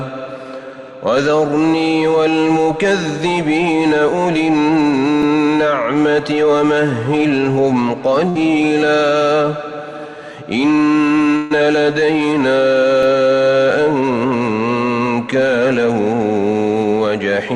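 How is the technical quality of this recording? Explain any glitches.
The recording has two short bursts of packet loss. The rest of the audio isn't judged here.

Burst of packet loss, at 8.29 to 8.45 s and at 11.36 to 11.52 s: runs of packets arrived too late or not at all. The receiver stretched the last sound and faded it, over about 56 ms the first time and 140 ms the second. You hear a held buzz or fading hiss, then a jump forward that skips about 60 ms and 140 ms of material. A plain dropout would fall silent instead.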